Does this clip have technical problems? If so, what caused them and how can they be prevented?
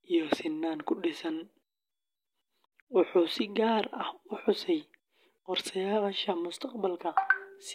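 No, no technical problems here.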